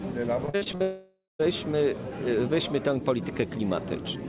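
From 0.46 to 0.82 s there's repeated packet loss, giving that robotic sound. Six short holes, the longest 57 ms, are each patched by stretching the previous bit of sound, so over half that stretch is filler and it comes out choppy.

Right after, from 0.82 to 1.45 s, the sound smears into a fading buzz or hiss, drops to about 0.2 s of silence, then comes back with a chunk gone. That's likely a long network dropout, with the receiver concealing until it gives up. Throughout, nothing reaches above 4 kHz, which fits a narrowband G.711-type call path.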